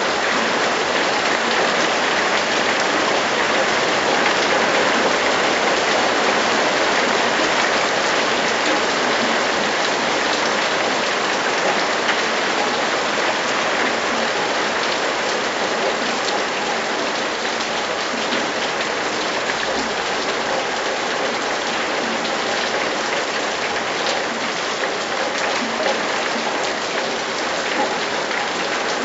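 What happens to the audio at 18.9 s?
Nothing goes wrong at 18.9 s; the sound plays through that moment intact, with no dropout, click or other audible fault.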